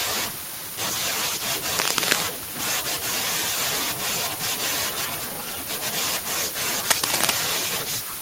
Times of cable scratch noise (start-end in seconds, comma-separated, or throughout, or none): 1.77-2.21, 6.86-7.30